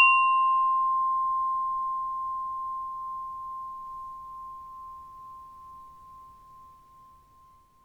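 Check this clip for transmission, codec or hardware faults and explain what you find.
No faults found.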